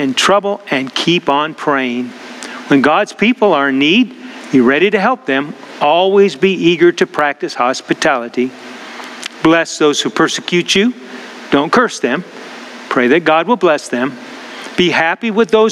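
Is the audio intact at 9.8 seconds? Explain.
No. At 9.8 seconds, as throughout the clip, there is gain pumping: the level swings by about 25 dB, bringing loud and soft parts closer together and squashing the dynamics. The likely cause is gain set far too high, with a fast limiter clamping every peak.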